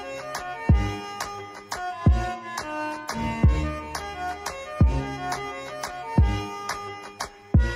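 No technical faults can be heard anywhere in this clip.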